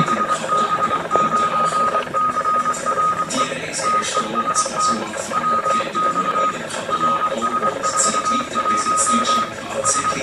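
Nothing technically wrong turns up anywhere in the clip, so there's nothing here to flag.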